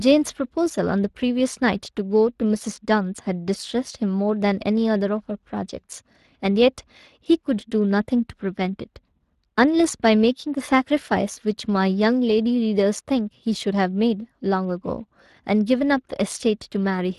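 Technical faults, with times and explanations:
throughout, Speex codec: The speech was passed through the Speex CELP coder, which models each short stretch with a vocal-tract filter and a coded excitation signal. Too few bits went to that excitation, and the damage is plainly audible, which fits a stream of about 22 kbps. Because the excitation is only roughly matched, its errors come through as a noisy, hoarse roughness laid over the speech.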